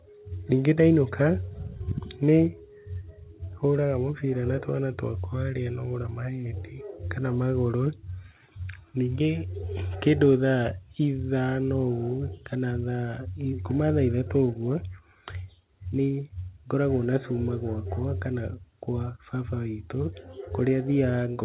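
No technical faults can be heard anywhere in this recording.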